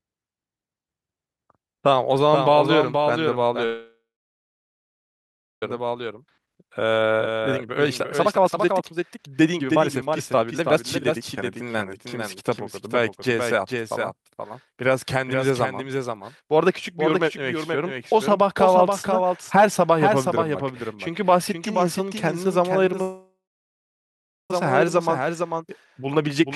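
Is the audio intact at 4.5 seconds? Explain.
No. A call audio freeze runs from 3.65 to 5.63 s. The last sound continues as a fading buzz, then about 1.6 s of silence. The likely cause is a jitter buffer that ran empty. The audio resumes where it stopped, so nothing is lost.

A doubled audio track is also present here. A full-band copy about 5 dB quieter trails roughly half a second behind. This likely comes from a second, slower capture path.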